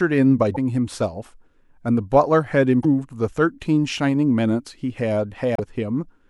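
Damaged data in a compressed stream appears at 0.54 s, 2.81 s and 5.55 s, each lasting about 40 ms. Corrupted bytes make the decoder misread frames and lose sync while it hunts for the next frame header, producing a brief chirp or squawk in the speech.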